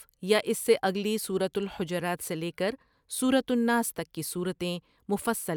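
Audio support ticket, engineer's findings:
Engineer's findings: no audible technical fault in the speech audio, nothing to action on this ticket.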